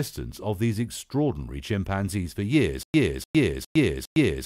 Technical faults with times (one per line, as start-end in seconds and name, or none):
2.83-4.45 stutter with silent gaps